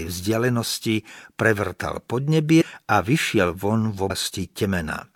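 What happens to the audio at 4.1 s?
At 4.09 s some compressed frames are skipped: the decoder never plays a short run of frames, so the speech jumps forward by roughly 150 ms, which fits about five frames of around 26 ms each. Because neighbouring frames overlap, the join comes out as a brief smeared blip rather than a sharp click. That sets it apart from a dropout, which leaves an audible gap of silence, and from a sample-level splice, which snaps.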